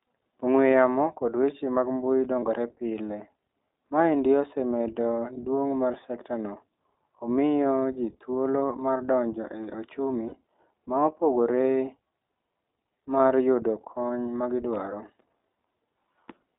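iLBC codec, throughout the speech: the band is limited to roughly 300 Hz to 3.7 kHz, and the voice sounds plainly rough and slightly synthetic. Each 20 ms frame's excitation is coded independently, which fits iLBC's 15.2 kbps mode.

Lost iLBC frames at 2.40 s, at 10.28 s just after "mar donjo e ochumi", and at 14.25 s between "mar yudo kony" and "ma gidwaro". The decoder filled each gap by repeating the last pitch cycle with added noise, so a brief held, buzzy vowel replaces the audio. The gaps last about 20 ms, 40 ms and 20 ms, which fits one, two and one lost frames. The sound recovers almost immediately afterwards.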